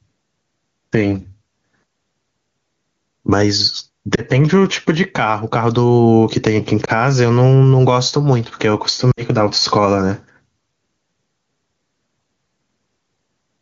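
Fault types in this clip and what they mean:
Gain pumping: The microphone gain is likely set far too high, with a fast limiter clamping it down on each loud sound. The gain swings by around 10 dB, so the speech sounds squashed and flat in level.
Lost AMR speech frames: Radio errors corrupted frames, so the AMR-WB decoder filled each gap by reusing the last good settings at falling gain. Single 20 ms losses near 4.15 and 6.85 s give brief dips, and a 60 ms run from 9.11 to 9.22 s drops to near silence within two frames.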